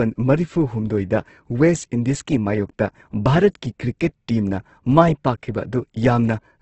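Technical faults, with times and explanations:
Throughout, Opus compression: the speech sounds heavily coded, with a rough, grainy, noisy texture on every sound rather than the watery swirl of MP3. The encoder has kept each band's energy but filled the detail with folded or noise content, so few gaps open up. Nothing remains above about 8.1 kHz, which fits a wideband setting, and the damage points to a rate near 12 kbps, likely Opus in its CELT music mode.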